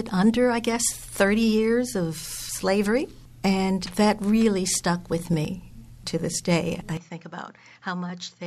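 At 2.49 s and 5.45 s, roughly 40 ms of sound vanishes in an abrupt skip, likely audio missing between chunks spaced 3 s apart; the waveform shows a hard splice without any gap.

From 6.97 s onward, the sound drops about 10 dB and dulls with no gap, likely the input switched to a poorer device; the spectrogram shows nothing above 7.6 kHz and a faint new noise floor.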